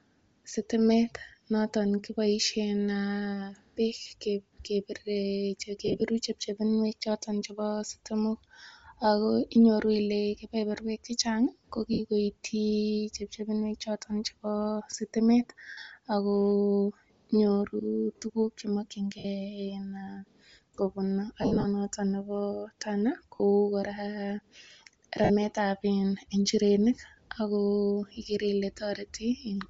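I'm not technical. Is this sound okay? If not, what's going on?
No. The speech has a grainy, breathy edge all the way through, likely from Bluetooth LC3 compression, which throws away fine high-pitched detail and fills the gap with noise.

There are also lost LE Audio frames at 3.99, 5.86 (just before "chepchinuek chotok chepo sitimok"), 11.93, 15.69, 19.18 (just after "tugun chemakchin"), 21.42 (just before "notok nepo"), 23.36 and 25.24 seconds. At each of these moments, tiny pieces of the wireless stream never arrived. The receiver filled each gap by replaying the last bit of sound with its detail scrambled, so you hear a brief noisy smear. The longest is at 21.42 seconds, where about 160 ms is patched over roughly a quarter of a second.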